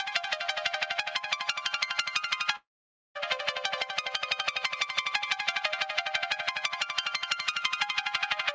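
At 2.56 s the sound suddenly gives way to a smeared, buzzy continuation of whatever was playing, which fades out quickly and leaves near-silence until the audio picks up again at 3.18 s. That's most likely a long network dropout. Packets stopped arriving, the receiver stretched the last bit of sound to cover the gap, and then it gave up. Roughly 0.6 s of material never comes back. Through the G.722 call path there's nothing above 8 kHz anywhere.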